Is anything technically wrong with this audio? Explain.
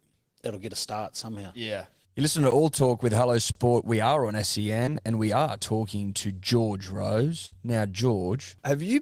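Yes. The speech is interrupted by three kinds of fault: two dropouts to digital silence, one short concealed packet loss, and one burst of packet loss.

Block of digital silence, at 2.51 s and from 3.52 to 3.55 s. Here the output simply went to zero, most plausibly because the buffer wasn't filled in time. The first hole is about 12 ms, which fits a 512-sample buffer. The second lasts about 32 ms. Each starts and stops abruptly, so the first is heard as a tick and the second as a short hole. Unlike packet-loss concealment, nothing is filled in. The gap is true silence.

Short concealed packet loss, from 4.85 to 4.90 s. About 20 ms of audio never arrived. The receiver covered it with 16 ms of sound extrapolated from what came just before, then crossfaded back, stretching the moment by a few milliseconds. What you hear is a brief smear or wobble rather than a gap. That absence of silence and of hard edge clicks is what separates it from the dropouts above.

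Burst of packet loss, from 7.46 to 7.59 s. Here about 60 ms went missing in a run, several times the earlier loss. The receiver kept extending the last sound for 58 ms while turning it down, adding about 11 ms overall. The result is a held, fading buzz or hiss, after which the speech resumes with the lost stretch gone. Its length and audible decay distinguish it from the brief smear at 4.85 s.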